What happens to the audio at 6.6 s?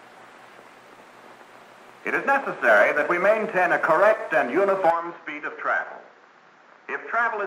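At 6.6 s the audio is inside a stretch from 4.90 s to the end where it sounds like the input switched to a poorer device. The input likely changed mid-recording. Nothing above 7.3 kHz remains, so the sound turns duller. It drops somewhat in level, with a faint new noise floor and no gap at the switch.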